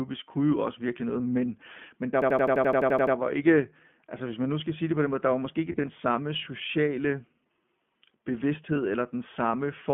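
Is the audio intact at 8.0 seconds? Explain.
No, at 8.0 s the iLBC codec is at work, as it is for the whole clip. The speech sits in a narrow 150 Hz to 3.4 kHz band, and each frame's excitation is coded on its own, which fits 20 ms frames in the 15.2 kbps mode. That leaves the voice plainly rough and synthetic.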